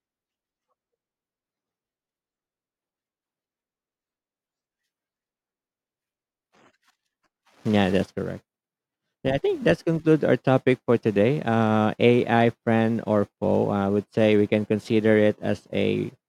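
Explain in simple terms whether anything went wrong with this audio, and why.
Nothing went wrong: the speech comes across with no audible fault anywhere in the recording.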